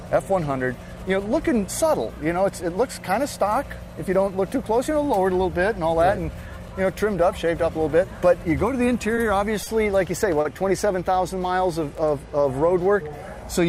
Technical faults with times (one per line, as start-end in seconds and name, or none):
9.15-9.19 short stall from a late packet
9.63-9.68 short stall from a late packet
10.41-10.47 short stall from a late packet
11.98 block of digital silence